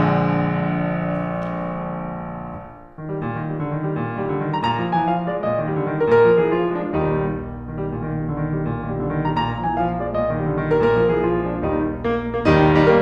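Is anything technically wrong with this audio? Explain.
Yes. From about 7.06 s to the end of the music there's mains hum, a steady low drone at 60 Hz sitting fairly high, only about 10 dB or so under the music. It comes from the power line leaking into the signal, most likely through a ground loop or a transformer nearby, so the 60 Hz tone, with a little of its low harmonics, rides continuously underneath everything once it starts.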